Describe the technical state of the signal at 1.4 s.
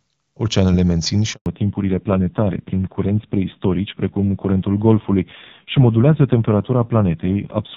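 At 1.4 s the phone is mid-handover between networks and no speech frames arrive, so after "mențin și" the speech fades out quickly into a 120 ms handover gap of silence, from 1.34 to 1.46 s.

When the new link starts at 1.46 s, the call has fallen back to narrowband. The sound stays cut off above 4 kHz and turns dull and rough through the end, which fits a low-rate AMR-NB mode.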